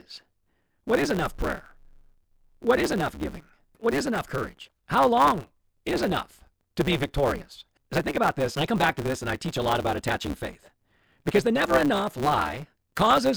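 From start to finish the speech carries a steady buzz at 138 Hz and runs 1.6 times too fast while keeping its timbre. This is a block size mismatch (truncated): each written block, which fits 512 samples, loses its tail when read shorter.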